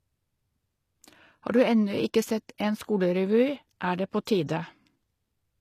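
Speech that was likely first squeezed through a very low-bitrate codec, consistent with HE-AAC near 24 kbit/s, then re-saved as a much larger MP3: low-bitrate audio saved at a high bitrate. Throughout, nothing sounds above 15 kHz, and the earlier encoding's losses remain unrestored.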